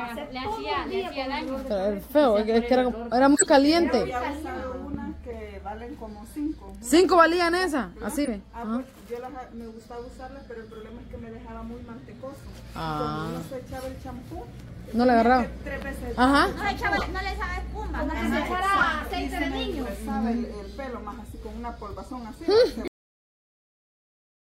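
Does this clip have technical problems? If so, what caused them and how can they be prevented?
Yes. Corrupt frames were decoded at 3.35 to 3.48 s, 5.30 to 5.35 s, 6.32 to 6.36 s, 8.24 to 8.28 s, 16.97 to 17.03 s and 18.78 to 18.84 s. Each is a brief chirp or burst of noise. The damaged bits gave the decoder wrong gains or codes, so it put energy at the wrong frequencies for a few frames. The first, longer event spans several frames. On a spectrogram these appear as short, sharp-edged smears or stray bands that do not belong to the surrounding sound. Adding checksums and concealing or dropping frames that fail them would prevent this.

A loud pop sits at 4.94 to 4.97 s. It is a single sharp transient about 5 dB above the surrounding level, and the sound carries on beneath it. The likely cause is a voltage step or pulse, from a plug, switch, static discharge or driver glitch, entering the signal chain. 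On a waveform it is a narrow spike rising above the envelope. On a spectrogram it is a thin vertical line across all frequencies. Secure connections, grounding and stable drivers prevent it.

The cut-off end occurs at 22.88 s. The audio stops mid-sound and drops straight to digital silence with no decay, because the final buffers were never written or played. On a waveform the signal ends abruptly without fading, followed by a flat line. On a spectrogram the energy halts along a hard vertical edge. Flushing and closing the stream properly before ending the recording prevents this.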